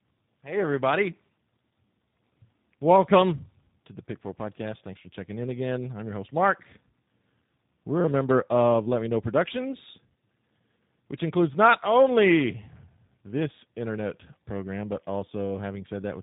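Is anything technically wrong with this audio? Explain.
Yes, this has tandem speech coding running through the whole clip. The speech sounds like it crossed several codecs in a row, likely three separate speech coders, each decoding and re-encoding the last one's already-damaged output, so the errors stack up. You hear it as rough, muffled, warbly speech with nothing above about 3.8 kHz. The final stage sounds like a low-rate coder, which fits G.729A at 8 kbit/s, with ADPCM stages before it.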